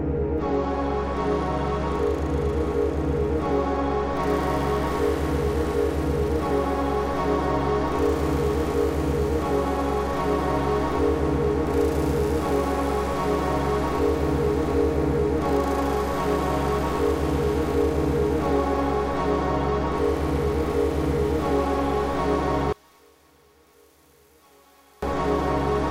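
One channel inverted, from 22.73 to 25.02 s: the sound collapses to a faint residue, dropping by about 32 dB when heard in mono, then returns at full level. This is likely a polarity reversal on one stereo channel. Everything common to left and right cancels when the two are summed, so centred and low-frequency content nearly disappears, leaving only the small difference between the channels.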